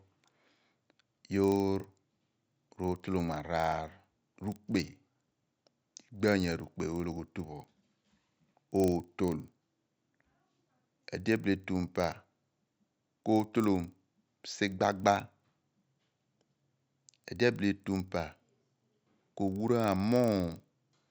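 From start to finish, the sample-rate conversion from 16 kHz to 48 kHz was handled with the resampler restarted on every block. Each 40 ms block was converted in isolation, so the filter had no true neighbouring samples at either edge, leaving a small error at every boundary. Those errors recur 25 times a second, giving a low buzz under the speech that follows the signal and vanishes in the pauses.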